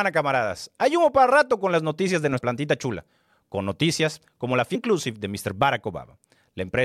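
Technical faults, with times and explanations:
2.37–2.39 s and 4.74 s, damaged data in a compressed stream: corrupted bytes in the encoded stream make the decoder misread frames and lose sync, producing a brief glitch after "con las noticias de" and again after "con noticias como la".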